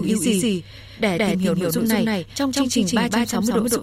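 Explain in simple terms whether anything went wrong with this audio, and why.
Something likely captured the same audio twice, a doubled audio track: throughout the speech, an equally loud copy trails about 0.15 seconds behind, like a slapback echo.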